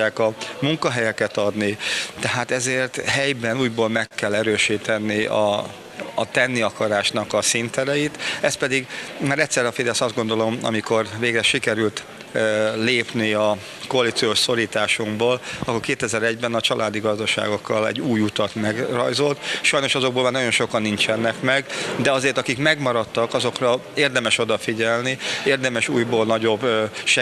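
From 3.11 to 4.13 s, packets kept arriving late, so the jitter buffer ran dry eight times and the receiver bridged each gap by extending the last sound, about 107 ms in all. None of the audio is lost, and the longest gap is 46 ms, but these repeated stalls (stutter) make the passage drag and catch in small hitches, with roughly a tenth of the span filled in.

Right after, from 4.78 to 6.33 s, the buffer was building back a reserve. The receiver repeated single pitch periods and pieces of pauses over and over, adding 118 ms. This jitter buffer slow-down plays the audio at 93% speed with the pitch unchanged, so sounds come out drawn out and a little stretched.

Later the buffer held more than its target, and the receiver cut short pieces of one or a few pitch periods to shed the delay. This jitter buffer speed-up happens three times. From 8.40 to 9.32 s it runs at 109% speed and removes about a tenth of a second. 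From 19.77 to 20.32 s it runs at 106%, and from 26.48 to 26.73 s at 111%, each trimming roughly 40 ms. In all three the pitch holds while the sound briefly hurries.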